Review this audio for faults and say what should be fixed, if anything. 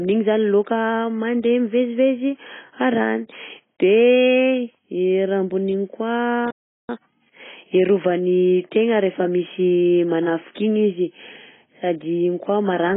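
The speech is dull and smeared from start to finish. Held sounds warble, and sibilants turn fizzy. Nothing survives above 3.7 kHz. The likely cause is heavy AAC compression, and the sound fits AAC-LC at about 16 kbps. At that rate the encoder drops the top band entirely. It quantises what remains so coarsely that holes and swirling artefacts appear. To prevent it, encode speech at 64 kbps or more.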